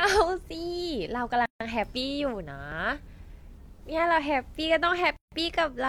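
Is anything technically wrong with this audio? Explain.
Yes. At 1.46 to 1.60 s and again at 5.16 to 5.32 s, the speech stops dead for about 150 ms and then resumes: a gap at a join of encoded pieces, where each separately encoded segment kept its start-up delay and end padding. At 2.72 s there is a sudden skip of around 30 ms of speech, likely a dropped buffer (overrun), where samples were overwritten before being read.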